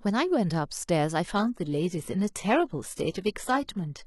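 From 1.35 s on, codec artefacts abruptly rise, with no gap. An adaptive stream switched to a lower bitrate, consistent with a 16 kbit/s HE-AAC version.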